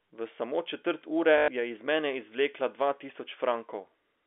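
Packet loss with the last packet repeated at 1.38 to 1.48 s, just before "je iz mene izvlekla": about 100 ms of audio went missing and the receiver replayed its final packet, giving a robotic stutter whose 50 Hz buzz fits 20 ms packets, over the narrow telephone band of the G.711 line.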